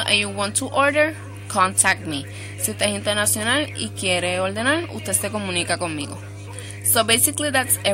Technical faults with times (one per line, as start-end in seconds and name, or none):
0.00-7.93 mains hum
0.12-0.14 hard clipping
1.79-1.92 hard clipping
7.00-7.87 hard clipping